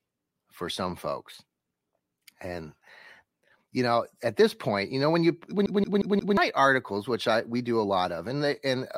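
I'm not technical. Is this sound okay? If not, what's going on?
No, there's a glitch at about 5.66 s. The sound suddenly stutters, with the same tiny slice of speech, about 0.18 s long, playing four times in a row with a brief cut at each jump, until 6.37 s. That's the classic CD stuck on one turn: a scratch keeps knocking the laser back a track at the same spot on every turn of the disc, so the player loops that bit before moving on.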